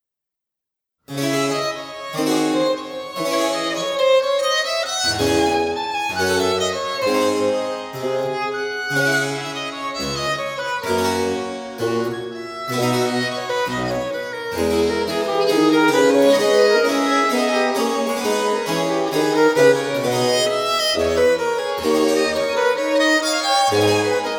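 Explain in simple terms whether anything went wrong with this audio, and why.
Nothing went wrong here: there are no dropouts, glitches, distortion or other technical problems anywhere in the recording.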